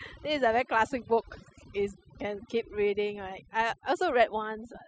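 From 0.0 to 2.0 s a faint, steady ticking about ten times a second sits roughly 35 dB below the speech. This is Wi-Fi interference: a nearby radio's beacon, repeating every 102.4 ms, is being rectified by the audio circuit. Throughout the clip the background drops to near silence flecked with twinkling specks. That is overdone noise removal, with bands near the noise estimate pulled down hard and quiet parts of the voice removed along with them.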